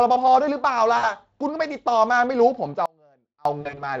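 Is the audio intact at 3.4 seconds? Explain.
No. From 2.86 to 3.45 s the wanted signal was likely lost while the path after the break stayed live, an audio dropout to a faint residue. For about 0.6 s the speech cuts out abruptly, leaving only a faint leak about 30 dB down.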